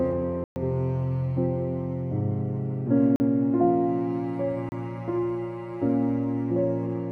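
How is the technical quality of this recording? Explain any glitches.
Three blocks of digital silence break the recording. Samples were zeroed at 0.44 to 0.56 s (120 ms), 3.16 to 3.20 s (40 ms) and 4.69 to 4.72 s (30 ms). The sound drops out and returns without a fade, and the longer gap is heard as a brief hole.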